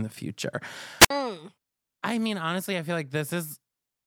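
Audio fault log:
1.00–1.10 s, wireless microphone squelch dropout: the speech breaks up briefly as the radio link from the transmitter fades. Hiss and static rise over the weakening signal, then the receiver's squelch cuts the output for about 57 ms, leaving a hole of near silence before the speech returns. On a spectrogram, a short wash of broadband noise runs into a blank vertical gap. On the waveform, the envelope drops to a flat line for that stretch.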